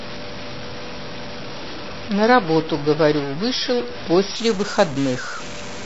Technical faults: stuck bit; adaptive stream starting at a low bitrate

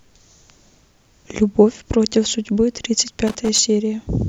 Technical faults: loose connector crackle

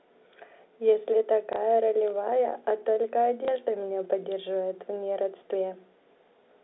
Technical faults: packet loss with last packet repeated

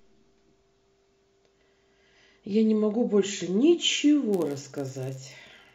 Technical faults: block size mismatch (padded)

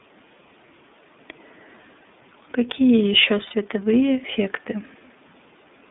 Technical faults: iLBC codec; lost iLBC frames

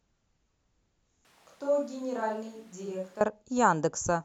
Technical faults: switch to a distant microphone

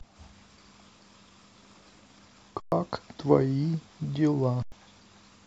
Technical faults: underrun with held sample

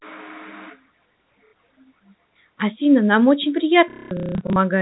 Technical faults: packet loss with last packet repeated

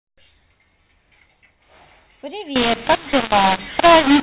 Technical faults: mu-law and A-law mixed up

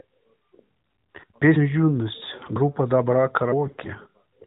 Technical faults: AMR bit errors

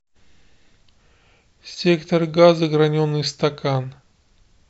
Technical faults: none

